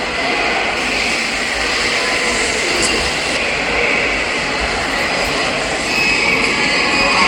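From 0.77 to 3.37 s there's pre-emphasis left on, following the CD 50/15 µs curve. The treble lift applied before encoding never got its matching de-emphasis, so 10 kHz sits about 8 dB hot relative to 1 kHz. It comes across thin, bright and a bit sizzly.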